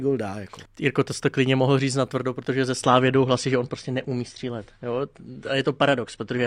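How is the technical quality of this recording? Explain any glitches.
Quality drops partway through, from an adaptive stream at a lower bitrate. At 2.85 s, right after "na tvrdo protože ze", the stream switched to a leaner encoding for the rest of the clip, which fits a step from about 96 to 32 kbit/s AAC. With less data, treble above 14.6 kHz vanishes and compression artefacts thicken. Unlike a dropout there is no gap, and unlike a fixed filter the change is abrupt.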